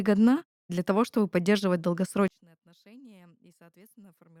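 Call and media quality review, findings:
Speech drops about 29 dB from 2.28 s to end; faint residue remains. Likely one channel inverted, polarity flip cancelling shared content in mono sum.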